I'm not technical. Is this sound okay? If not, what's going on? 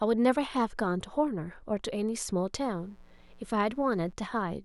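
No. There is mains buzz from 2.57 to 4.13 seconds, a quiet, steady, raspy buzz beneath the speech. Interference from the 60 Hz mains power leaked into the recording, adding sharp spikes twice every cycle that stack up into a harsh, many-toned buzz.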